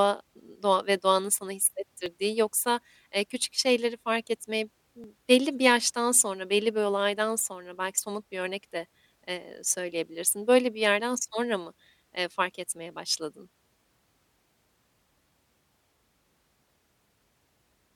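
At 2.06 s, between "doğa ve doğanın sana" and "yoksa eee küçük şeyleri", and again at 5.04 s, after "küçük şeyleri fark etmeyi" and before "belli bir yaştan sonra", the speech skips forward by roughly 20 ms. This is audio missing between chunks, likely from the processor losing a sliver each time it hands over to the next 3-second block. Unlike a dropout, no silent gap is left; the two sides butt straight together.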